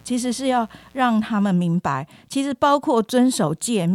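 From 0 to 1.5 s, a raspy 60 Hz mains buzz sits roughly 35 dB under the speech. Its switching-spike harmonics reach into kilohertz, unlike a smooth hum.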